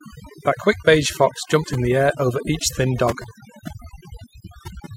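A speech recording with overdone noise removal running the whole way through. The noise reduction was pushed too hard, so any frequency band sitting close to its noise estimate gets pulled right down or switched off, and the softer parts of the voice get swept away with the noise. The gaps drop away and break up into little twinkling specks.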